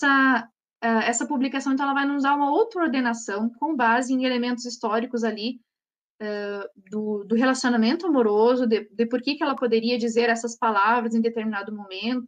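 At 9.57 to 9.59 s, damaged data in the compressed stream makes the decoder misread a frame and lose sync, giving a brief chirp or blip of about 24 ms. A spectrogram shows a short vertical smear of broadband energy, and the waveform a sudden discontinuity.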